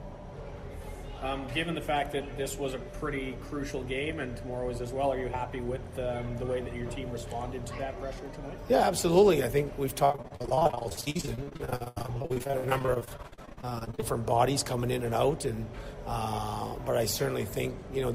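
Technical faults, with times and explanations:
10.05–14.04 s, repeated packet loss (robotic sound): the audio turns choppy, with pieces dropping out. Dozens of short gaps, the longest 82 ms, were each filled by extending the preceding sound, so about 42% of this stretch is patched-over audio.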